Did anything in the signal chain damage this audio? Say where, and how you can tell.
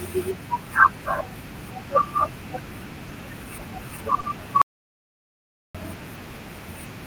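Yes. At 4.20 to 4.25 s the speech briefly hangs on one sound, held about 30 ms too long, then carries on with nothing lost. That is a short stall from a late packet: the jitter buffer ran dry and the receiver stretched audio, adding 30 ms of delay.

From 4.62 to 5.75 s the speech cuts out into dead digital silence for about 1.13 s, with no room tone at all, and resumes mid-flow. This audio dropout to silence likely comes from the input device or link failing while the recorder kept writing silence.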